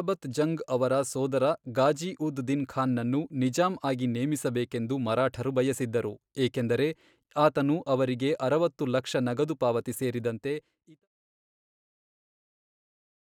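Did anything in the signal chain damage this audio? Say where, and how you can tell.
No, the ending is simply a smooth fade-out.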